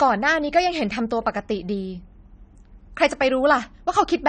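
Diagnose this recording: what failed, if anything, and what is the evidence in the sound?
Dull, smeared speech with nothing above 9 kHz throughout. The codec stage is at fault, likely AAC compression, quantising coarsely in a way that fits about 32 kbps.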